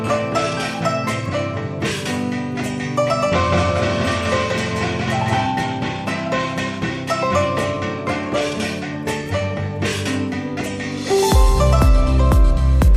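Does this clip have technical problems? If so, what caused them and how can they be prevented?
Yes. From 3.52 to 5.46 s there is a doubled audio track: a second, equally loud copy trails about a fifth of a second behind, likely from a slower capture path or misaligned edit. On the waveform and spectrogram, every onset repeats at that fixed offset, starting and stopping abruptly. Prevent it by routing each source through a single capture path and checking edits for overlapping duplicate regions.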